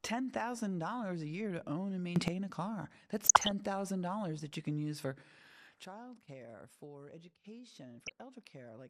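Throughout, the speech sounds dull and gurgling, with a granular edge and upper frequencies fading in and out. That is MP2 compression whose damage is plainly audible, likely from encoding at about 80 kbps, where too few bits force upper sub-bands off and leave the rest coarsely quantised.

From 2.16 to 2.28 s, between "year to own and" and "a car", the level leaps up by about 13 dB, background noise with it, in a sudden gain jump, likely a digital gain change applied in a single step with no ramp.

From 3.22 to 3.51 s, just after "a car", short blips of noise cut across the speech. This is DAB burbling: bit errors at a rate well under one percent slipped past error correction into the MP2 data, corrupting samples in single sub-bands.

At 5.8 s a second sudden gain jump drops everything by about 14 dB and stays low to the end, likely another unramped gain step.

From 7.95 to 8.12 s, the burbling returns briefly, again from uncorrected bit errors in the MP2 stream.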